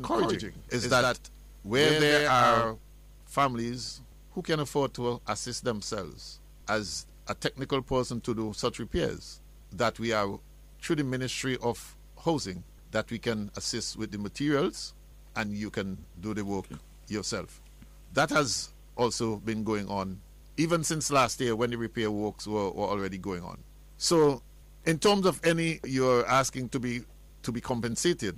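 From the very start until 2.78 s, a doubled audio track is present: a second full-band copy of the sound trails the original by about a tenth of a second, roughly 5 dB quieter, with no decay or room colour. The likely cause is the same signal being captured again through a slower path. It sounds like a hard, dry slapback. On a waveform every transient appears twice; on a spectrogram each onset is mirrored shortly after, until the copy stops abruptly at 2.78 s.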